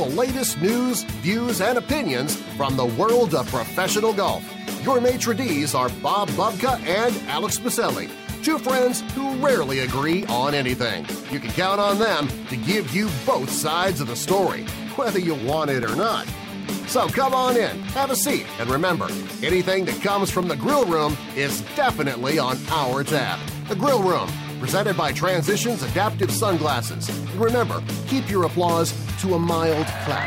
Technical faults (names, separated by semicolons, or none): periodic USB or driver dropouts